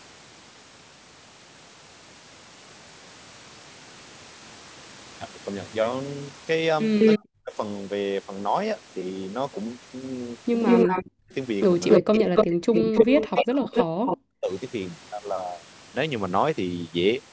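Around 6.99 to 7.19 s, 10.66 to 11.02 s and 11.89 to 14.17 s there's an echo leak: a delayed copy of the sound, 188 ms behind in the first two and 280 ms in the last, about 5 dB louder than the direct sound, likely from a loudspeaker echo the canceller missed. Overlapping each, at 7.18 to 7.55 s, 10.86 to 11.35 s and 12.07 to 14.5 s, there's speech suppressed in double talk. The voice dips by as much as about 40 dB and breaks up, for roughly two seconds in that last stretch.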